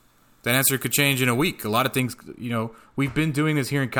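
From 0.0 to 2.0 s, the speech has pre-emphasis left on. A treble boost was applied, and the matching de-emphasis was never applied. The top end stays lifted, by about 13 dB at 10 kHz relative to 1 kHz. The shape of the lift fits a 75 µs FM curve. The sound is thin and overly bright. Sibilants hiss and sting. The boost ends at 2.0 s, just before "you know".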